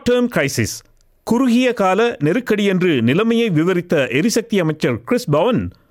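Nothing is technically wrong with this audio.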